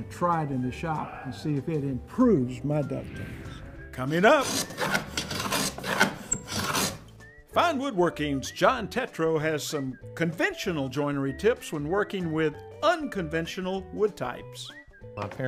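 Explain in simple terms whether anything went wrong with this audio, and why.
Two brief glitches come from chunks out of order. The audio travels in small 20 ms pieces, and at 4.64 to 4.72 s one piece arrived late and played three pieces after its proper place. At 12.72 to 12.76 s another piece was late by one. Nothing is missing, but the sound is briefly shuffled, and each misplaced piece creates abrupt joins that you hear as a quick jumble.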